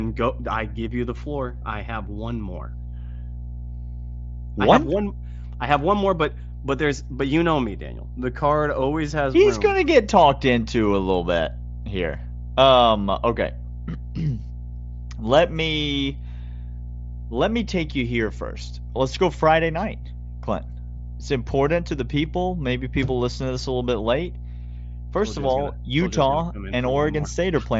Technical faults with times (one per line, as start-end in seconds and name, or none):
0.00-27.80 mains hum